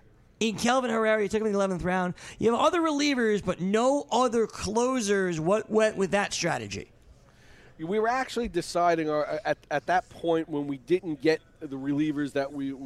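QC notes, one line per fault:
8.21 s, dropped samples: a single sharp click, seen as a thin vertical line across the spectrum. The likely cause is a handful of missing samples, around a tenth of a millisecond, making the waveform jump abruptly to a later value. That gap is too brief to remove any audible sound.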